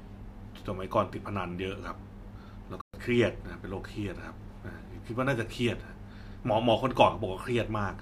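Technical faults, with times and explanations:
2.81 to 2.94 s, Bluetooth dropout: the speech cuts to silence for 122 ms, likely late packets dropped on the way to the headphones, then resumes further along as if it had kept playing.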